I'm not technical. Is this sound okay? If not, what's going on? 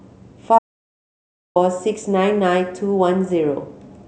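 No. From 0.59 to 1.56 s the speech cuts to dead silence for about a second: an audio dropout to silence, likely from the input briefly disconnecting or muting.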